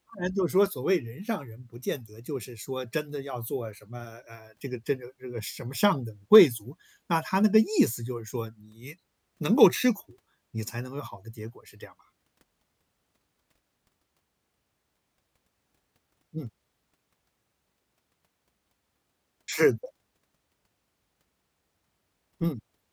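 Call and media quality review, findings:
Nothing to flag on this speech recording, so there's no ticket to write.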